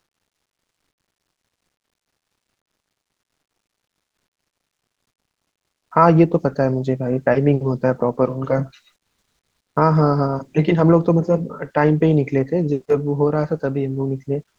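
In the final moment of the speech, from 14.48 s to 14.59 s, the background drops away by about 19 dB and is replaced by a flat, featureless hiss lasting about 107 ms. The real room sound, already about 36 dB below the loudest passages, loses its texture. This is comfort noise in place of the background, likely from Opus DTX: the sender stopped transmitting during the pause and the receiver filled the gap with synthetic noise.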